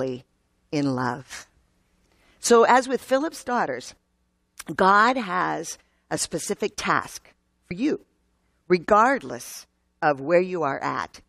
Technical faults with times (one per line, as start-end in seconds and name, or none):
7.70 compressed frames skipped